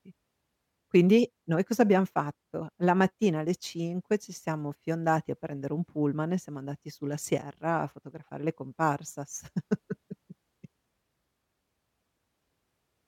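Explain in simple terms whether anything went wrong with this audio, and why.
Nothing went wrong with this audio; no fault can be heard anywhere in the recording.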